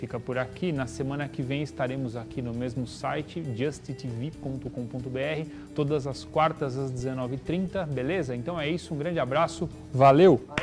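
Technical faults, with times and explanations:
No technical faults can be heard in the audio. There is nothing here to time or explain.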